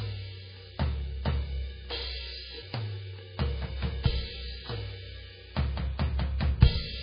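A music clip with heavy MP3 compression damage throughout, likely from a very low bitrate that fits about 16 kbps. Nothing is heard above 5 kHz, and weak parts of the spectrum flicker in and out from frame to frame, giving a watery, swirling texture with smeared attacks. That shimmering dropout is what sets it apart from a plain low-pass filter, which would dull the top end but leave what remains steady.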